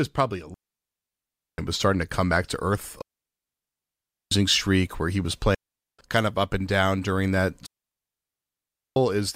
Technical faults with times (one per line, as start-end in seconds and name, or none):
0.54-1.58 digital wireless dropout
3.02-4.32 digital wireless dropout
5.55-5.99 digital wireless dropout
7.66-8.96 digital wireless dropout